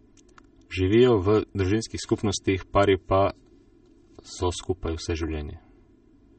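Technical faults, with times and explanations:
Throughout, channel delay (comb filtering): the speech sounds hollow and phasey, as though heard through a tube, because one channel lags the other by about 3 ms and the two are summed to mono. Components common to both channels cancel at fixed, evenly spaced frequencies, the first near 150 Hz. Unlike a swept flanger or phaser, these notches never move, and unlike plain low-pass dullness, the colouring repeats in a regular series up the spectrum.
Throughout, MP3 compression: nothing is present above about 8.4 kHz, and the sibilants have a watery, swirling texture with metallic chirps. The likely cause is MP3 encoding at a low bitrate, consistent with roughly 32 kbps. With too few bits, the encoder drops the top band at a hard cutoff and switches weak frequency lines on and off between frames. That flicker, not just lost treble, distinguishes it from a simple low-pass filter or a band-limited microphone.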